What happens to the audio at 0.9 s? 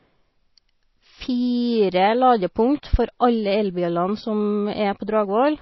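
At 0.9 s you're hearing the same thing as the whole clip: likely MP3 compression at around 24 kbps, with nothing above 5.8 kHz and a watery, swirly smear on the speech.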